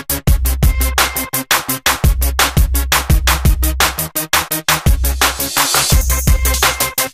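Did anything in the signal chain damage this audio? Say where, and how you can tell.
No, nothing in the signal chain damaged this audio.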